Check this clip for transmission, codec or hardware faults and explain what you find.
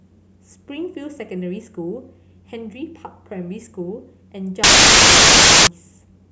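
One fault appears. From 4.64 to 5.67 s, samples built from the wrong bytes: misassembled bytes promote the low bits, producing loud, harsh broadband noise.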